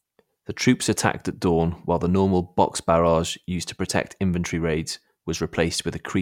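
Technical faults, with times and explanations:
No technical faults found in the speech recording.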